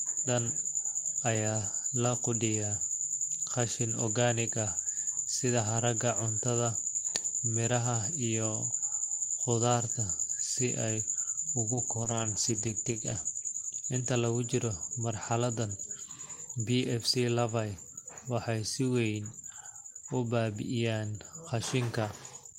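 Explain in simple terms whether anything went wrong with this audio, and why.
From 11.72 to 13.75 seconds the speech turns rough and muffled, then clears again. This is a call bitrate drop: the connection briefly sent far less detail, so the encoder cut corners. Unlike dropouts, the sound never stops; it just gets coarser.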